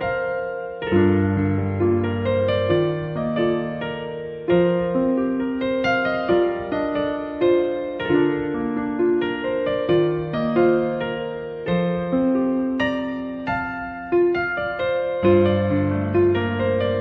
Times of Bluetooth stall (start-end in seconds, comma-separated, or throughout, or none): none